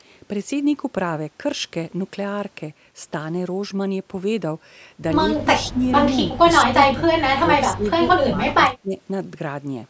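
At 5.27 to 5.43 s a faint second copy of the speech trails the original by 128 ms, well below it at around 15 dB down. This is an echo leak, likely from a loudspeaker at the far end whose echo canceller let some of its microphone pickup return. On a spectrogram the harmonic bands of the speech show a weaker, shifted duplicate. The waveform shows a small echo burst just after the stronger one.

Speech suppressed in double talk follows, likely from an echo canceller mistaking the talker for echo while both sides spoke. The level dips at 5.64, 6.36, 6.71, 6.94, 7.41 and 7.74 s. These are short bites of 40 to 150 ms, each dropping by roughly 10 to 20 dB. The deepest and longest cut runs from 8.19 to 8.95 s and pulls the speech down by roughly 25 dB. The waveform envelope shows notches and a long trough there. On the spectrogram the energy thins across the band, which runs up to 8 kHz.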